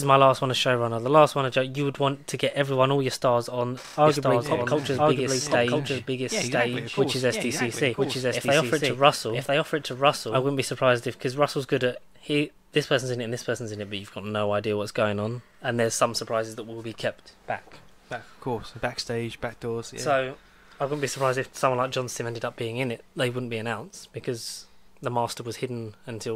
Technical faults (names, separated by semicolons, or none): doubled audio track